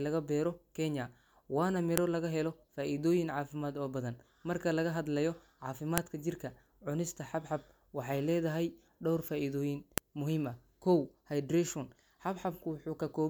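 At 1.98 s there's a sharp, loud snap cutting through the speech, and it comes back at 5.98 s and again at 9.98 s, exactly 4 s apart. That's a file header played as audio. The stream was built from 4-second WAV pieces stitched together with their headers left in, so those few dozen bytes of metadata get decoded as samples. The result is a brief, hard click at every seam, regardless of what the talker is doing.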